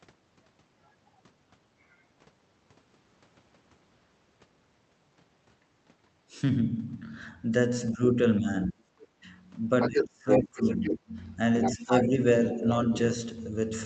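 From 7.92 to 9.26 s the talker's speech is suppressed in double talk. The level dips by about 25 dB at its deepest, for roughly 0.7 s in all. This is likely an echo canceller mistaking both voices for its own echo and turning everything down. Inside that stretch, at 9.01 s, the other side's voice leaks through, very faint, about 30 dB below the speech.

From 9.81 to 10.96 s the other side's voice leaks through strongly, at about the same level as the talker. At the same time, 9.88 to 11.13 s, the talker is cut by about 30 dB at worst, for about a second in total. The talker dips while the far voice stays.

From 11.61 to 12.07 s the leak returns, about 5 dB under the speech. From 11.68 to 12.19 s the talker drops by about 10 dB.

At 12.54 to 12.63 s there is a short dip of about 5 dB. From 12.55 to 12.72 s a brief leak sits about 10 dB down. Throughout, the high end stops near 8 kHz, which fits a narrowed call-codec path.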